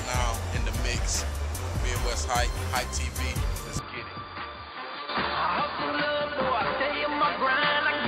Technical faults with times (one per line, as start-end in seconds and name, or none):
3.79-8.07 input switched to a poorer device